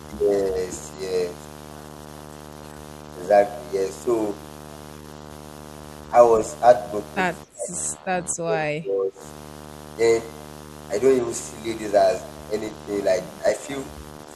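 A video or display buzz runs through the whole clip. It sits at 75 Hz, the picture's field rate, with hash above it. It is strong, about 15 dB below the speech. A screen or video cable is coupling into the audio path.

From 7.44 to 7.73 s the speech sinks hard, by roughly 30 dB. From 7.95 to 9.22 s it dips again, by around 20 dB. This is likely speech suppressed in double talk, with the echo canceller turning the talker down along with the echo.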